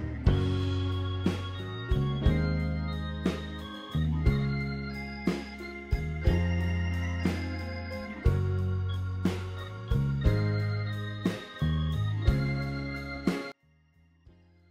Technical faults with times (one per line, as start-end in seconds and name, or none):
13.52-14.71 one channel inverted